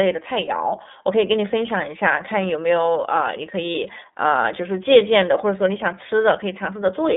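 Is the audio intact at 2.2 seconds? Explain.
No. At 2.2 s the speech carries iLBC codec damage, which runs through the whole clip. The band is held to roughly 200 Hz to 3.7 kHz, so nothing above that reaches the ear, and each 30 ms frame's excitation is coded on its own with no help from the previous frame. The result is plainly audible: a thin, slightly rough, synthetic-sounding voice, consistent with the 13.33 kbps iLBC mode.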